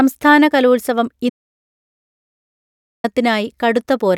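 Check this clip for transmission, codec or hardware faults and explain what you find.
An audio dropout to silence runs from 1.30 s to 3.04 s, most likely because the input link or device was lost while the recorder kept writing zeros. The speech cuts off abruptly into total silence, with no room tone, and resumes after about 1.74 s of missing audio.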